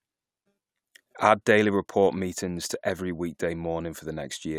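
Nothing in this recording points to a technical fault.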